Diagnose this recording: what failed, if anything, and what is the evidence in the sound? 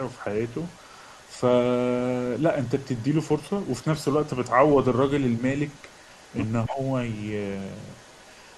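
Echo leak in call processing: a faint copy trails the speech by a fixed 283 ms, about 30 to 35 dB down, at 0 to 1.39, 1.93 to 3.36, 3.52 to 3.72, 4.11 to 5.01, 5.32 to 5.44 and 5.66 to 8.57 s. It is likely loudspeaker pickup the echo canceller missed. Room reverb would smear continuously, not repeat at one discrete delay.

Speech suppressed in double talk, also in call processing: from 6.69 to 6.79 s the speech dips about 10 dB for roughly 100 ms. Level drops rather than cutting to silence, which points to the canceller ducking during overlap rather than a network dropout.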